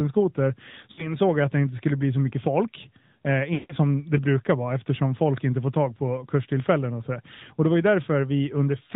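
The whole clip goes through the AMR narrowband mobile codec. Everything above 4 kHz is gone and the speech sounds buzzy and synthetic, which fits a mid rate around 10 kbps.

From 0.92 to 1.17 s there are lost AMR speech frames: about 60 ms, roughly three frames. The decoder repeats its last settings, giving a short warbly dip before "jag att det inte".

From 3.54 to 3.75 s about 160 ms goes missing. The sound smears, fades toward silence, then comes back rough on "som det brukar vara".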